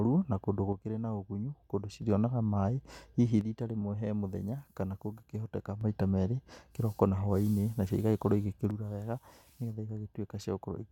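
Most likely one stereo channel is intermittently dropping out, so once the two channels are summed to mono, the speech common to both falls abruptly by about 6 dB while anything carried only in the lost side vanishes. This one-channel dropout happens from 0.73 to 2.02 s, from 3.41 to 5.81 s, and from 8.71 s to the end of the clip, each time as a sudden step down in loudness that stays until the channel returns.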